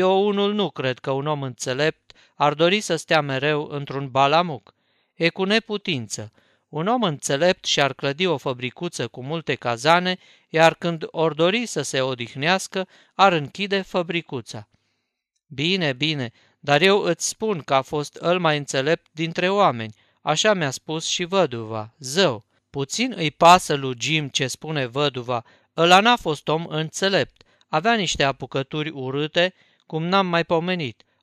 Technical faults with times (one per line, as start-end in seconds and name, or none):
none